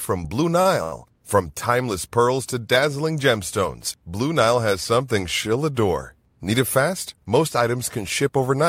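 Short stalls from late packets, at 0.61 to 0.67 s and again at 0.83 to 0.94 s: each time a packet had not arrived when it was due, so the jitter buffer drained and the receiver held the last bit of speech in place, for 38 ms and then 87 ms, until the data turned up and playback resumed exactly where it left off. Nothing is lost, but the sound hangs unnaturally, with a faint buzzy or dipped quality, and the overall delay grows by those amounts.

Jitter buffer speed-up, from 6.52 to 7.26 s, right after "has something she'll adore": the buffer was holding more audio than its target, so the receiver trimmed short pitch-period-sized slices over and over, around 50 ms in total. The speech plays about 5% faster with its pitch unchanged, so this stretch sounds slightly rushed.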